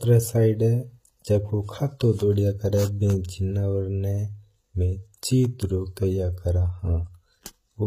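Speech carrying plainly audible HE-AAC compression damage throughout, likely from a low-bitrate encode, which fits about 20 kbps. The treble is rebuilt from copied lower bands, so s sounds come out gritty and lispy. On a spectrogram, upper bands look smeared and repeated, ending sharply at 14.9 kHz.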